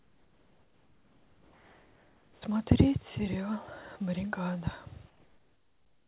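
From 0.00 to 2.42 s and 5.08 to 6.07 s, comfort noise in place of the background: steady, featureless hiss about 5–6 dB quieter, showing as a flat, smooth band cut off at 4 kHz, likely from discontinuous transmission.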